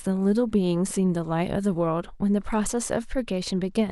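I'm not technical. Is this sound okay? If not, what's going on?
No. From about 2.52 s to the end, there is a Bluetooth SBC bit pool drop. The wireless link got crowded, so the sending device cut the amount of data it uses for each slice of sound, roughly to half, to keep the audio from breaking up. With less data to go around, the highest, crispest parts of the speech are dropped and the rest is stored more roughly. The voice turns dull and muffled, with a gritty roughness.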